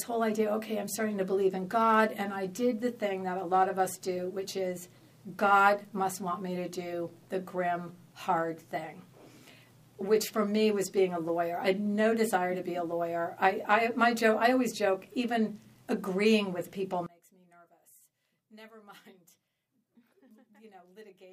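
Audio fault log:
17.06–21.33 s, one channel inverted: from 17.06 s to the end of the clip the level falls by about 27 dB, leaving a faint residue in which the centred content has largely disappeared. The likely cause is reversed polarity on one stereo channel. When the two channels are summed to mono, the material they share cancels, and only the small difference between them survives.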